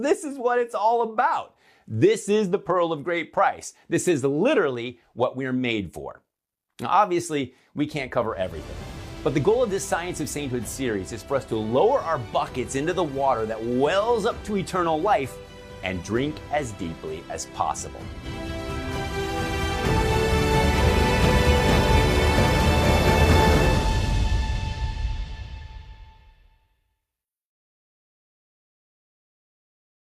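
Nothing in the recording stood out as a technical problem on listening.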